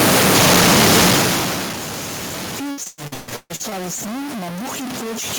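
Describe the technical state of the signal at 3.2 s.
At 3.2 s the signal sits inside a burst of repeated packet loss (robotic sound) running from 2.71 to 3.73 s. Packets kept failing to arrive, nine gaps in all, the longest 138 ms, and each hole was bridged by extending the last received sound. Concealment fills 57% of that second, about 580 ms, so the speech comes through choppy and robotic, with fragments dropped between the smeared patches.

Under that, and across the whole clip, a distortion rides on the waveform, and the quieter stretches carry a noise floor instead of clean silence. The likely cause is a stuck bit: one bit of each sample held at a fixed value, so roughly half the samples land off by that bit's weight in a pattern that follows the waveform, and small values near zero flip noisily around the sign.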